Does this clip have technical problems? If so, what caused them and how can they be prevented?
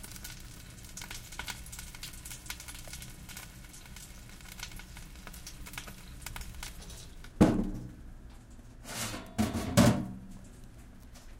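Yes. Two brief gaps at 4.76 s and 7.43 s are each a block of digital silence. The audio drops to silence for under a millisecond (about 32 samples in the second), with hard edges. To prevent it, give the audio processing enough headroom and buffer size that every output block is filled in time, and guard calculations against invalid values.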